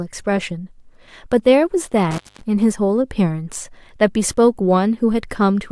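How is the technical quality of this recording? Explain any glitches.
The recording has one clear glitch, an intermittent contact between 2.11 and 2.43 s, where the speech briefly cuts out. A loose cable or plug lost its connection for about 210 ms in that window, breaking the signal path. The gap is bounded by crackle as the contact scrapes open and closed, and faint hiss remains while the line is open. That scratchy, irregular edging tells it apart from a digital dropout, which would switch to clean silence.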